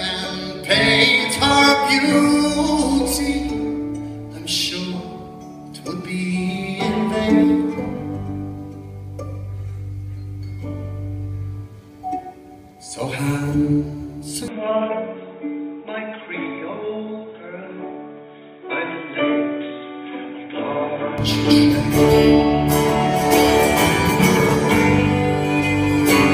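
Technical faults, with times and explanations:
14.48 to 21.18 s, input switched to a poorer device: the sound suddenly turns boxy, with nothing above 3.8 kHz, then clears again, with no gap and little level change. A faint new background noise comes and goes with it, which points to a likely change of microphone rather than plain filtering.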